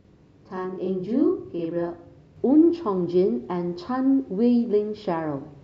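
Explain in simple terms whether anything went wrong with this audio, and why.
From 0 to 2.37 s the speech sounds doubled, a channel delay (doubling): one channel arrives 46 ms late and is mixed back in.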